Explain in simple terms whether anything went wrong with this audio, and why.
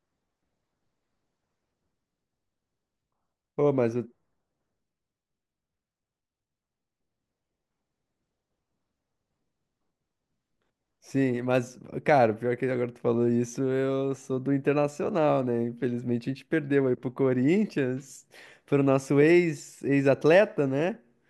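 Nothing went wrong here; I hear no technical problems.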